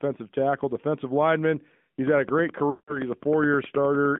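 The speech in this clip has gone through the AMR narrowband mobile codec for its whole length. The band is confined to roughly 150 Hz to 3.5 kHz, with the plainly audible buzzy, synthetic edge of a vocal-tract model rebuilding the voice from sparse pulses, which fits a mid-rate mode near 10.2 kbps. A simple telephone band-limit would sound muffled but still natural. Here the tone itself is coarsened, which marks the damage as coming from the codec rather than from filtering alone. From 2.07 s to 4.17 s a regular train of clicks ticks over the audio at about 9.6 per second, roughly twenty in all. Each has much the same shape and peaks at about 5 dB above the signal. The clicks continue through pauses and keep a steady pace, so they sit outside the codec's own artefacts and most likely come from interference from nearby equipment or a faulty connection or power supply. Between 2.70 s and 3.00 s there are lost AMR speech frames, about 180 ms in total, which fits roughly nine missing 20 ms frames. 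The voice does not cut to silence as in a plain dropout. It is smeared and drawn out on repeated pitch and vocal-tract settings with falling gain, then returns weak or rough for a moment.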